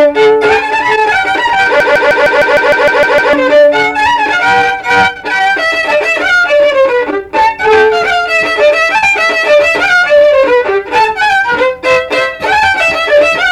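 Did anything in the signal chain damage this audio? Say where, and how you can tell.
Yes. From 1.80 to 3.33 s a broken-record loop repeats an identical 0.15 s fragment ten times back to back. The likely cause is a stalled playback buffer re-sending its last block. Unlike echo, the copies never decay, and the audio that should have played there is lost.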